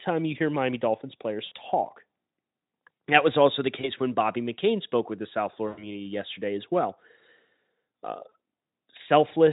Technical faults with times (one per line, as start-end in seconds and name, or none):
1.45-1.52 VoIP packet loss concealed by the speech codec
3.82-3.90 VoIP packet loss concealed by the speech codec
5.67-5.95 VoIP packet loss concealed by the speech codec
8.29-8.32 VoIP packet loss concealed by the speech codec